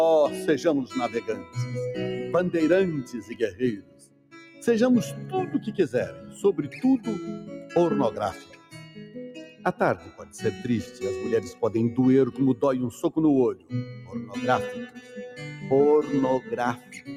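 The level pumps and thins throughout the clip: sustained parts and decaying tails keep sinking while sharp onsets jump back up, a swing of roughly 15 dB. That is the signature of a noise suppressor applied to music or sounds. A processor designed for speech treats steady, non-speech energy as background noise and keeps pulling it down, so the audio breathes and flutters instead of holding its natural level. The sound cut by the noise suppressor is clearest in six places: 1.16 to 1.56 s (a dip of about 9 dB), 3.04 to 4.64 s (about 13 dB, lasting most of that span), 6.13 to 6.38 s (about 5 dB), 7.41 to 11.62 s (about 11 dB, on and off for around two seconds in total), 13.55 to 15.15 s (about 12 dB) and 16.41 to 17.09 s (about 11 dB). In each case held or fading material was judged to be noise and attenuated harder than its surroundings, so it sinks in level or its tail is cut short.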